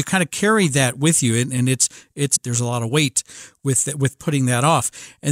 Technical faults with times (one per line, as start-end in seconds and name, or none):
2.35-2.37 stream segment skipped